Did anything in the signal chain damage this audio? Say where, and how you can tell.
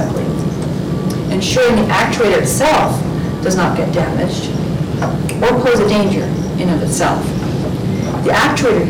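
Yes. Hard clipping runs through the whole clip: a gain stage ahead of a converter or a sample-format conversion was driven about 19 dB past its ceiling, so roughly 15% of all samples hit that stage's limit and were cut flat. Every loud passage carries a harsh, buzzy fuzz from the high harmonics those square tops create. Soft saturation or limiting would round the peaks and sound warmer, and codec damage would smear or swirl rather than rasp on each peak.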